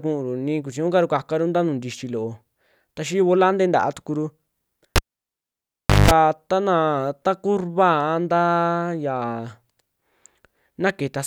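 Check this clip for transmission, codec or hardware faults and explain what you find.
A cable pulled and plugged in interrupts the speech from 4.96 to 6.11 s. The live connection breaks with a pop, leaving about 1.1 s of near silence. Then a 190 ms burst of 50 Hz mains buzz comes as only the tip makes contact, and a second pop marks the signal's return.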